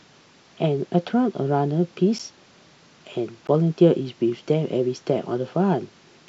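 At 2.19 s and again at 3.47 s the speech drops into a block of digital silence, 10 ms and then 15 ms of silence. The signal cuts out and back with no fade, so each hole lands as a tick.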